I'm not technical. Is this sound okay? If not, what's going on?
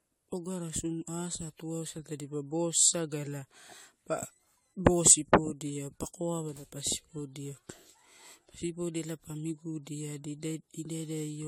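No. The speech has generation loss from start to finish. It sounds swirly, smeared and hollow, and the starts of sounds are blurred. This is likely from being re-saved in a compressed format about seven times, with the damage building up each time.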